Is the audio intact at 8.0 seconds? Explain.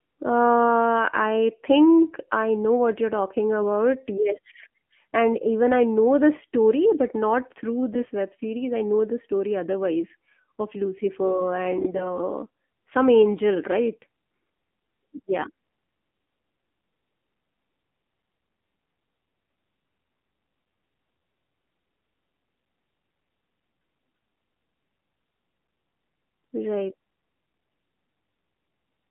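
No. From 7.93 to 8.10 s, between "story but not through" and "web series I know", the speech is hit by AMR bit errors. Over those 0.17 s, nine 20 ms frames arrived with flipped low-priority bits, at an error rate of a few percent, while the protected core bits still decoded. The excitation pulses land in the wrong places and the fine gain and spectral values drift. Pitch and level hold roughly, but the voice turns hoarse, scratchy and gargly.

That moment also sits inside the AMR narrowband mobile codec damage that runs through the whole clip. The band is limited to about 150 Hz to 3.4 kHz, so nothing above that survives. The pulse-driven vocal-tract model runs at a low rate, consistent with the 7.4 kbps mode, and the speech has a plainly audible buzzy, synthetic quality. The bit-error burst is layered on top of this.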